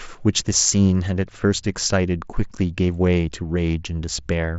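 Speech with no technical faults; the band tops out near 7.7 kHz, consistent with the mSBC Bluetooth headset codec it passed through.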